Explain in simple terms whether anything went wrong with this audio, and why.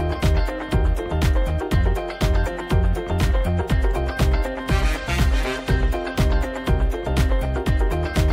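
Nothing went wrong here; the audio holds steady the whole way, with no dropouts, glitches or sudden jumps to catch your ear.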